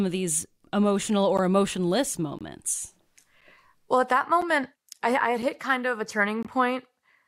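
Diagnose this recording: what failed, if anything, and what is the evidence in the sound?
Gap between stream segments, at 1.37 s, 2.39 to 2.41 s, 3.41 s, 4.42 s, 5.42 s and 6.43 to 6.45 s: the speech drops into hard-edged silences of 12.7, 21.2, 8.1, 7.0, 4.0 and 21.2 ms, spaced almost exactly one second apart, which fits 1-second stream segments. The fault sits at the streaming and playback stage. Each segment's timestamps leave a short hole before the next begins, and the player fills it with silence, so nothing is lost but the flow stutters.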